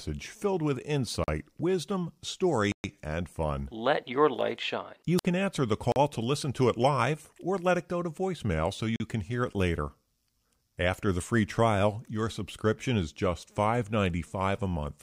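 Blocks of digital silence cut into this speech clip at 1.24, 2.72, 5.92 and 8.96 s. Three last 40 ms and the one at 2.72 s lasts 120 ms. Each drops hard to silence and back with no fade, as when output buffers go unfilled in time. A wireless microphone squelch dropout at 5.17 to 5.25 s brings a brief swell of hiss before the receiver mutes for about 57 ms. The radio signal has faded below the squelch threshold, and the voice then returns.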